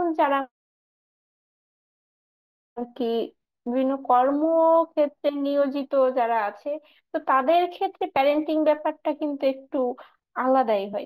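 Throughout, imaging from linear upsampling dulls the top. A faint image, roughly 45 dB down, adds shimmer between 8 and 16 kHz, which fits a 16 kHz source.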